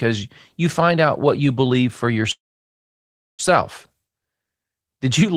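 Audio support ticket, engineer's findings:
Call audio freeze, 2.31 to 3.41 s. Speech cuts to a brief fading buzz, then about 1 s of dead silence. Resumes exactly where it stopped, nothing lost, just pushed back about 1.07 s. Likely a jitter buffer underrun from packets held up in transit; receiver bridged the wait, then played the late audio through.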